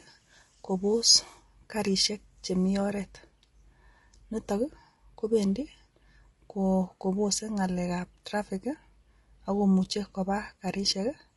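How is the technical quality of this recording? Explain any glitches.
The speech is clearly marked by codec damage throughout. Low-delay AAC compression, likely AAC-ELD at a rate consistent with 32 kbps, makes the voice rough and grainy. Its short frames smear harmonics, and a spectrogram shows noise filling between harmonic lines and a thinned upper band.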